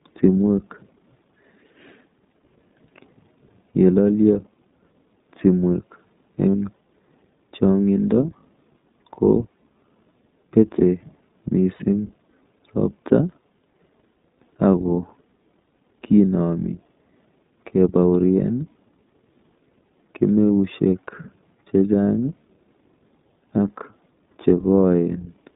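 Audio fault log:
throughout iLBC codec: the speech passes through a narrowband VoIP coder whose 20 ms frames fit the 15.2 kbps mode. Only about 150 Hz to 3.7 kHz survives, so the sound is thin and muffled, with a plainly audible rough, synthetic edge from the coded excitation.
3.72, 6.50–6.55, 9.53, 11.76–11.82, 20.50 lost iLBC frames: packets dropped, and the decoder filled each gap by repeating the last pitch cycle blended with noise. Each gap fits one or two lost frames and is heard as a brief held, buzzy vowel. Because each frame stands alone, the speech snaps back at once.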